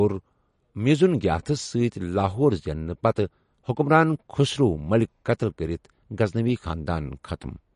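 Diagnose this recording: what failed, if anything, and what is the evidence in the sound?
Codec stage, likely MP3 compression: treble stops at 10.5 kHz throughout, and plainly audible watery artefacts in the speech fit a 40 kbps stream.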